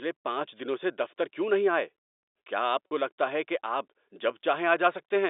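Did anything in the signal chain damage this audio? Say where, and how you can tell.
Yes, at the network stage: packet loss with pitch repetition at 2.89 to 2.91 s, between "نہیں آئے کیا آپ" and "لگتا ہے کہ آپ". About 40 ms went missing, which fits four lost packets. The receiver bridged the gap by repeating the last pitch period, so the speech briefly holds on a slightly buzzy tone before resuming. The G.711 telephone band around it stays intact.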